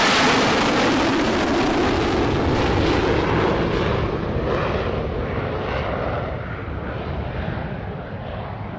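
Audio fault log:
The signal holds steady and continuous throughout, with nothing in the audio pointing to a technical problem.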